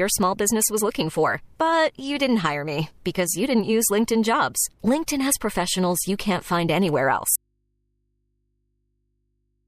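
The signal feed was likely lost at 7.36 s while the downstream path stayed live, giving an audio dropout to a faint residue. Right after "find anywhere" the speech cuts out abruptly, and through to the end only a low mains hum remains, roughly 50 dB below the speech.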